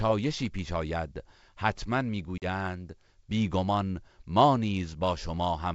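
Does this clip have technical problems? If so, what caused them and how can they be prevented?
Yes. At about 2.38 to 2.44 s the speech drops into a hard-edged gap of silence, about 40 ms long, and comes back slightly distorted for a moment. This is packet loss on an ADPCM call, here G.722 at 64 kbit/s, and the length fits roughly two lost packets. ADPCM codes each sample as a difference from a running prediction, with an adaptive step size. The missing data leaves the decoder's predictor and step size out of step with the sender's, so the first few tens of milliseconds after the hole come back distorted until the two sides converge again. The G.722 coding itself adds no more than faint wideband hiss. To prevent this, carry the call on a network path with less loss, and use jitter buffering with packet-loss concealment that also resets or re-synchronises the ADPCM decoder state.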